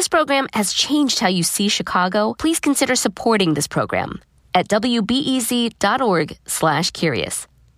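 Listening to this speech recording, nothing stood out as a technical problem at any point.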